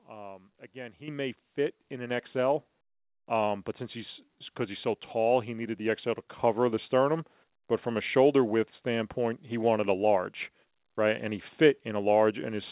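Microphone volume stepped up at 1.08 s, 2.10 s and 6.39 s: the call software judged the input too quiet and raised the device's gain in single jumps of about 9 dB, 4 dB and 3 dB. Voice and background leap louder together. The first falls between "again he" and "may fit in", the second just after "he may fit in", the third just before "the sternum". The call path's band limit at 4 kHz fits G.711 A-law.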